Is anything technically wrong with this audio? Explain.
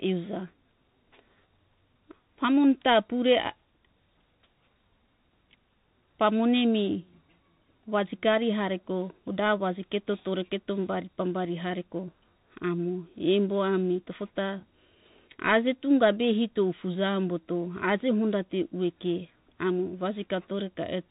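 Yes. Throughout, the speech carries Bluetooth CVSD headset codec damage: one-bit delta coding, consistent with 64 kbps, caps bandwidth near 4 kHz, roughening sibilants and leaving grainy hiss.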